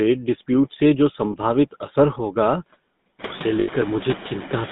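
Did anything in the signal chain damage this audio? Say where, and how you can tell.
Yes. In call processing, a noise suppressor pulls the background down about 17 dB between phrases. What's left rises back under the speech, and the room noise rising around 3.0 s gets the same treatment.

At the codec stage, the speech has that buzzy, gravelly GSM full-rate roughness, band-limited to roughly 150 Hz to 3.7 kHz. That fits the 13 kbps GSM full-rate codec.

Further along the chain, lost GSM frames show up as a short metallic ring held from 1.32 to 1.36 s, which fits one 20 ms frame. From 3.60 to 3.69 s, a longer rough ring lasts about 80 ms, consistent with four frames repeated.

At the driver or buffer stage, a jump in the sound at 2.99 s, skipping roughly 20 ms, points to a dropped buffer, likely an overrun.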